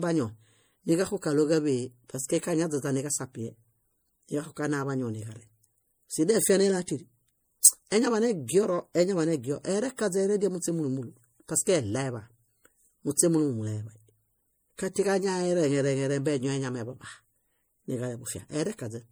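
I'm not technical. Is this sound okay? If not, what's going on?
No. The speech likely went through lossy compression a few times over, which is called generation loss, so from start to end it sounds swirly, hollow and smeared.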